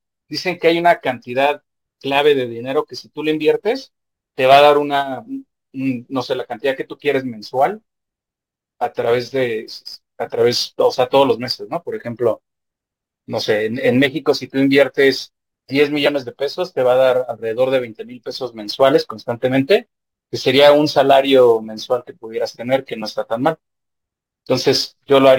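A fine hiss and grittiness rides on the speech for its whole length, thickening on loud passages and sibilant, high-frequency sounds and dropping away in the pauses. This is sample clock jitter: the converter's clock wanders by a few microseconds, so each sample lands slightly off time, and the resulting error scales with how steeply the waveform is changing. Here that error sits roughly 30 dB below the signal.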